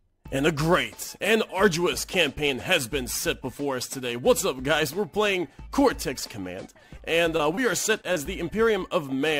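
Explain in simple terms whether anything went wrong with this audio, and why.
Short concealed packet loss briefly smears or wobbles the sound at 6.97, 7.37, 7.55, 8.01 and 8.13 s. Each time about 20 ms went missing and was patched by continuing the previous sound, rather than left as a silent gap.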